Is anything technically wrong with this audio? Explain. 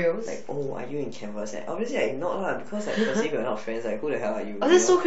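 Yes. The speech carries a DC offset for its entire duration, a constant shift of about -36 dBFS that moves the whole waveform off the zero line. Because it is a fixed level rather than a vibration, it produces no audible tone. It shows up as steady energy at 0 Hz, at the very bottom of the spectrum. It also eats a little headroom, since peaks on one side of the waveform reach full scale sooner than those on the other.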